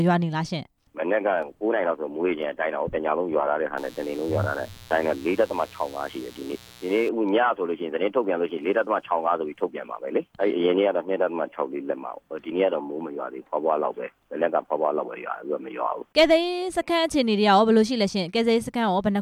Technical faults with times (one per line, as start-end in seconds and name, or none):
3.77-7.09 mains buzz